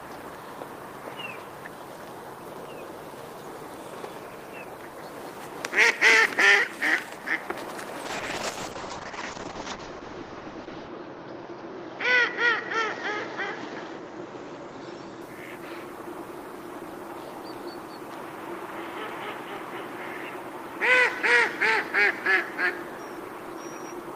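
From 8.07 s to 15.27 s a call bitrate drop makes the sound coarse and watery, with the top end falling from 20 kHz to 8 kHz for about 2.8 s at its worst. This fits a fall from 32 to 8 kbps, unlike packet loss, which leaves gaps.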